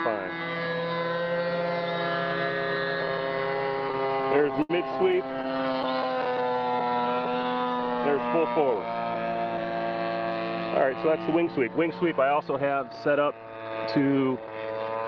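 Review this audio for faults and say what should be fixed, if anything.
Repeated stalls (stutter) run from 3.87 to 5.85 s. Packets reached the receiver late or too slowly, so its jitter buffer kept running dry. The sound halts 33 times in this stretch. Each time the receiver stretched the last bit of sound to cover the wait. The longest wait is 72 ms. In total about 398 ms is filled this way, a fifth of the span. Nothing is lost, but the audio drags and stutters.

A jitter buffer slow-down follows from 6.28 to 7.02 s. The buffer was low, so the receiver built up a reserve. It repeated single pitch periods and small pieces of pauses many times over. This adds 105 ms. The sound plays at 87% speed but keeps its pitch. Sounds in this stretch come out drawn out.

A jitter buffer speed-up runs from 10.85 to 11.92 s. Here the buffer held more audio than its target, as happens when late packets arrive in a bunch. 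The receiver cut short pieces of one or a few pitch periods to reduce the delay. Roughly a tenth of a second is removed. Playback runs at 108% speed with unchanged pitch, and this part sounds hurried.

Throughout the clip, the Opus call codec limits the sound to 8 kHz, which fits a bitrate of about 24 kbps.

These three faults trace back to irregular packet delivery, so the fix is to reduce network jitter and congestion on the link, or to let the jitter buffer hold a steadier, slightly larger target delay.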